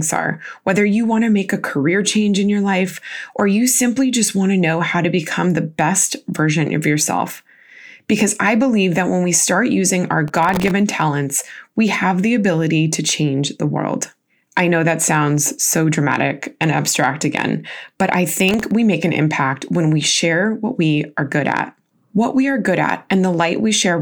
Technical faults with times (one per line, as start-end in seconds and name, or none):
10.28-10.71 processor overload crackle
18.49-18.71 processor overload crackle